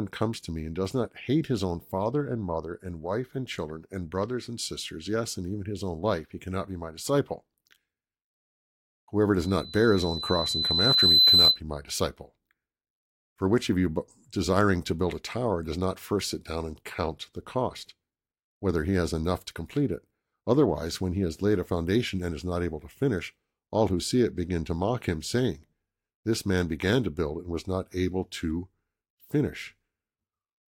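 Loudspeaker feedback squeal runs from 9.38 to 11.60 s, ending just before "my disciple". The microphone is catching the loudspeaker it drives, and around 4 kHz the loop gain tops one, so that frequency feeds on itself. It swells over roughly two seconds into a piercing whistle that rises well above the speech, on the order of 10 dB louder, before the tone stops.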